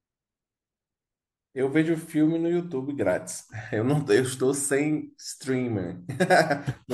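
No technical faults occur at any point in the audio, so there is nothing to describe in time order.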